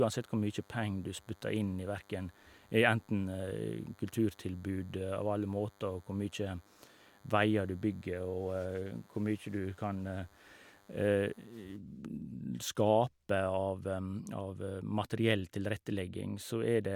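DECT cordless phone buzz runs through this speech clip from 0.00 s to about 11.8 s. It is a thin, steady buzz at 100 Hz, rich in harmonics, sitting roughly 30 dB below the speech. A DECT handset or base station close to the recording chain transmits a short radio burst every 10 ms. The audio circuitry rectifies each burst, turning that 100-per-second pulse train into an audible tone.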